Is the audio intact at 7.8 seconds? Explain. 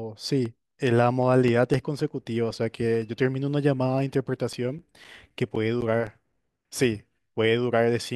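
Yes, the speech at 7.8 seconds plays through intact, with no audible fault at that moment.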